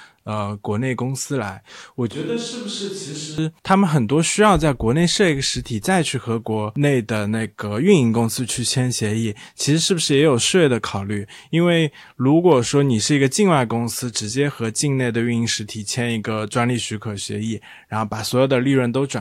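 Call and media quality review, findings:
Switch to a distant microphone, 2.11–3.38 s: speech abruptly turns roomy and hollow, thinner low end, about 5 dB quieter, noise floor roughly 30 dB under speech. Likely close-mic dropout with fallback to a far pickup. Spectrogram: faded lows, smeared reverb tails. Waveform: step-down in envelope at onset, step-up at return.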